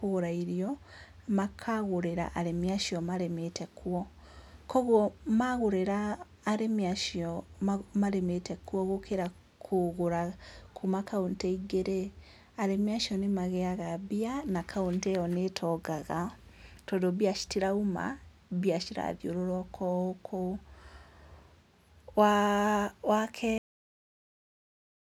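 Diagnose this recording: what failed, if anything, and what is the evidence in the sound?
The failure is a cut-off end at the storage or buffer stage. At 23.58 s, right after "waa wa", the speech stops mid-sound and drops straight to digital silence, which holds for the last 1.5 s. There is no decay or room tail, just an abrupt edge. This fits the final buffers never being written to the file: capture kept running, but the closing blocks of audio were lost before the recording was finalised.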